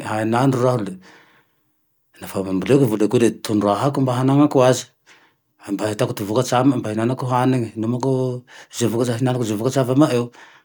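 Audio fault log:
No faults can be heard in this speech clip. There is nothing to log.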